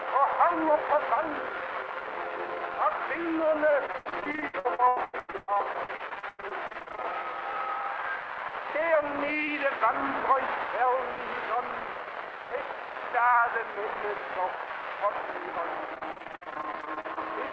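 From 3.86 to 7.13 s, then again from 15.94 to 17.19 s, there's repeated packet loss (robotic sound). Lost packets keep getting patched by stretching the last bit of audio, so it turns choppy. About 40% of the first stretch is filled in, with gaps up to 102 ms. The second is lighter, around 36% with gaps up to 56 ms. Nothing comes through above 8 kHz, which fits the G.722 call path.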